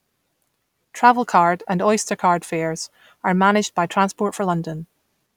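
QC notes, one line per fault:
Nothing stood out on listening to this speech recording.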